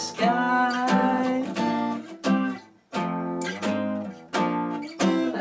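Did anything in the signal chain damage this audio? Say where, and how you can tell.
No, the audio carries nothing above 8 kHz, which fits a call path running a wideband codec such as G.722 at 64 kbps, and that band limit is simply how such a path carries sound rather than damage from any stage of the chain.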